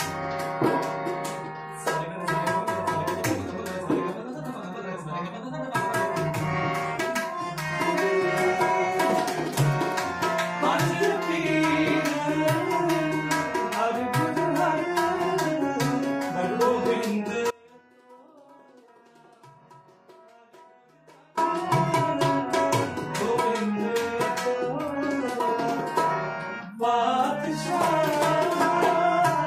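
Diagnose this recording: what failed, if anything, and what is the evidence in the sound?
An audio dropout to a faint residue runs from 17.51 s to 21.37 s, roughly 3.9 s, where the signal cuts out abruptly and then snaps back. The gap is not silent: a faint leak of the sound remains, around 30 dB below normal level. The likely cause is an intermittent break in the analogue wiring ahead of a still-live input. On a waveform the envelope collapses to a thin band with vertical edges; a spectrogram shows a dim stripe with sharp boundaries, unlike a fade.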